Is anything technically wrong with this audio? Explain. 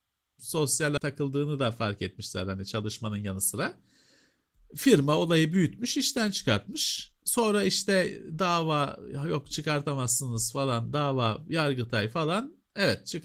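Yes, there are two faults in this speech clip.

Skip ahead at 0.97 to 0.99 s: roughly 0.7 s of audio never reached playback, and the receiver jumped straight to later audio that was already waiting. The two sides of the cut join with no filler, so the speech lurches forward abruptly.

Jitter buffer speed-up from 1.07 to 2.56 s and again from 3.08 to 3.56 s: the buffer held more audio than it wanted, so the receiver trimmed short pitch-period slices repeatedly. Speech runs about 6% fast in the first stretch and 11% in the second at unchanged pitch, sounding hurried.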